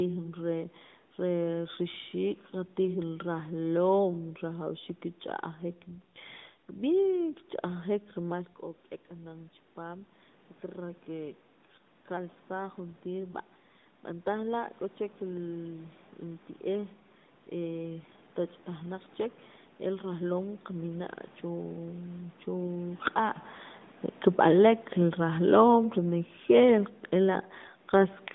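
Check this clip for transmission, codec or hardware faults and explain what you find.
One fault comes from the system: a gain drop near the end of the speech.

Automatic gain falling, from 24.3 s to 28.23 s: the call's automatic gain control judged the input too loud, or its background noise too strong, and lowered its gain gradually, by about 4 dB over those four seconds. Because it scales the whole signal, the voice and the room noise behind it sink together. That sets it apart from the talker's own change of distance around 23 s, where only the voice level shifts.

The narrow line band, roughly 150 Hz to 3.7 kHz with a light buzz, comes from the AMR-NB narrowband codec. It fits the 12.2 kbps mode and is how that codec works, not a fault.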